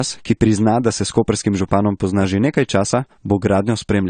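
Throughout, the speech ends sharply at 9 kHz, leaving an empty band above it on the spectrogram, with the first encoding's artefacts still present: likely low-bitrate audio saved at a high bitrate.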